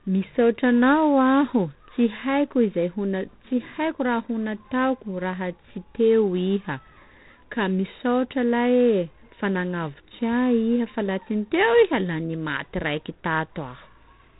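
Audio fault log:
Throughout: G.726 ADPCM. The speech has been passed through a G.726 coder at what sounds like 24 kbit/s, which spends only 3 bits on each sample to code its difference from an adaptive prediction. That coarse step size leaves a harsh, rasping hiss that rises and falls with the speech level, plainly audible on louder syllables. The band is also shut off at 3.8 kHz, so sibilants and upper consonant detail are missing and the sound is dull and narrow.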